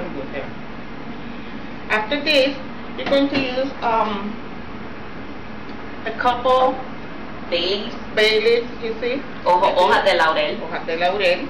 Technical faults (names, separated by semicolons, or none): hard clipping